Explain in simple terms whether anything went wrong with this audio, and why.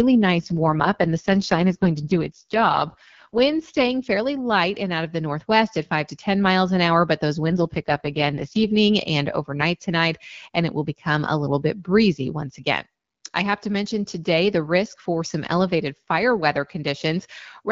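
An AMR rate drop makes the speech turn rough and synthetic from 0.39 to 3.92 s, before "fairly light and out", and from 7.48 to 8.69 s, between "an hour but those" and "and overnight tonight and". Unlike a dropout, there is no gap and no loss of brightness; the network simply squeezed the call into fewer bits.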